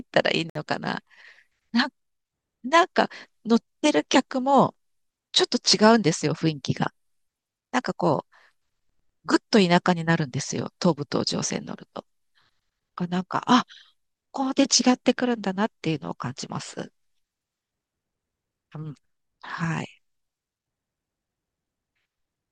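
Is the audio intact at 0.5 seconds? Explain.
No, not quite. At about 0.50 s the speech drops out into a silence of roughly 57 ms, running to 0.55 s, and then picks up right where it left off. That's a gap at a join of encoded pieces: the audio was encoded in separate chunks and stitched together untrimmed, so the encoder's leading delay and the padded final frame both survive as dead air. The codec smears the edges, so the truly silent part is shorter.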